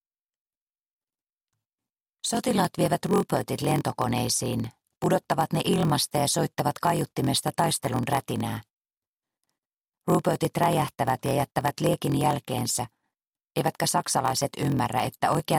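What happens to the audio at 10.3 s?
At 10.3 s the block size mismatch (padded) runs as it does throughout the clip. Each 1024-sample block the next stage reads is only partly filled, with zeros padding the rest. The regular gaps produce a 43.1 Hz buzz, and the audio plays at 0.938× speed with unchanged timbre.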